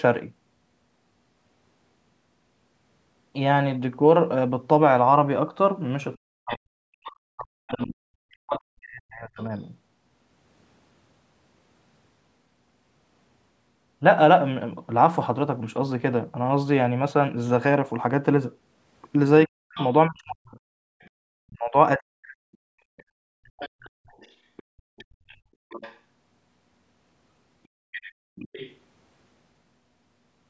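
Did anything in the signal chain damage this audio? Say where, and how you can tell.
Yes. The damage sits in the call processing, at the echo canceller.

Other side's voice leaking through: a second, fainter voice sits under the talker from 6.16 to 7.86 s, from 19.75 to 25.99 s, and from 27.92 to 28.76 s. It runs roughly 20 dB below the main speech. It does not belong to the talker. The likely cause is loudspeaker playback reaching the microphone, with the canceller failing to subtract all of it.

Speech suppressed in double talk: the talker's own speech sinks from 6.22 to 9.41 s and again from 19.47 to 22.24 s. The deepest dips reach around 40 dB. About three seconds are affected in the first stretch, and about one and a half in the second. Both stretches overlap the leaked voice. Likely the canceller heard both sides at once, could not tell them apart, and turned everything down.

Background gated by the echo canceller: from 20.87 to 22.97 s the room sound itself drops away, by about 33 dB at its deepest, for roughly 0.7 s in total. 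It then returns. This is the canceller clamping the microphone hard while the loudspeaker plays, and releasing it afterwards. It overlaps the second double-talk stretch. The band stops at 8 kHz, which is the call's normal microphone path, not part of this damage.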